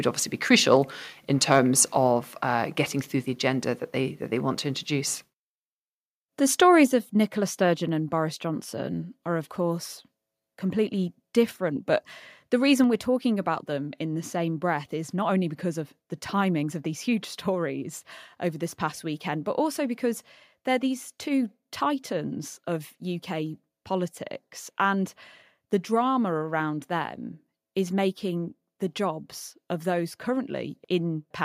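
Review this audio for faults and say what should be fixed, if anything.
Microphone overload at 1.52 to 1.56 s, just after "obviously be crucial in": the loudest peaks briefly go past full scale by about 1 dB, so their tops are squared off. That flattening adds a short, harsh crackle to the syllable. Only a small fraction of samples in that stretch are cut, so the damage is brief but audible. The likely cause is the microphone input gain being set too high for the talker's loudest moments. To prevent it, lower the input gain or add headroom so peaks stay well below full scale.

Microphone volume stepped down at 6.87 s and again at 12.84 s, the second just before "we're talking about them": the level drops abruptly by about 4 dB and then about 3 dB. Both voice and background fall together in a single step rather than fading, which is the mark of a device-level adjustment. The likely cause is the call software's automatic gain control reacting to a signal it judged too hot and cutting the microphone's input volume. 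To prevent it, disable automatic microphone adjustment in the call software and set a fixed, moderate input level.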